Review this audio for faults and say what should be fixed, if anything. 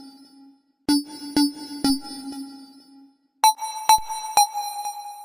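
A low thump lands at 1.90 s and again at 3.98 s while the sound carries on unaffected. These are DC steps: the waveform's zero line jumps by about -29 dBFS, then bleeds away through a 2 Hz high-pass. Keeping converter recalibration and offset-carrying input switching out of the live signal path, or gating it during those changes, prevents this.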